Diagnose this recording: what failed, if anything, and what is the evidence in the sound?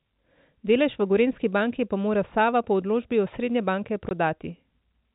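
A brief hard-edged dropout at 4.09 to 4.11 s, right after "osrednje banke", cuts the speech to silence for 20 ms. This is network-stage packet loss filled with silence, where the receiver played silence for missing packets. The gap fits two 10 ms packets. The G.711 telephone band is intact around it.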